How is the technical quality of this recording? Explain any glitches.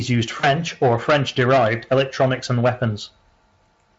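The recording has one clear glitch: a short dropout handled by VoIP packet loss concealment in the speech codec, from about 0.39 to 0.48 s. Around 40 ms of audio never arrived, which fits two lost 20 ms frames. The decoder filled the gap by repeating its last pitch and spectral shape while lowering the level, so the sound smears into a brief buzzy tone or coloured noise that fades. It stays thin for a moment after real packets resume, because each new frame is rebuilt on the previous guesses. The Speex coding itself adds little to no audible roughness, which points to a fairly high-quality setting.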